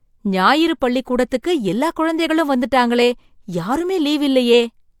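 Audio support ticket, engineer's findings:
Overlap between stream segments at 3.02–3.06 s, after "ஞாயிறு பள்ளிக்கூடத்துக்கு எல்லா குழந்தைகளும்". Tiny skip. Segment joiner trimmed about 40 ms of real audio. Waveform jumps.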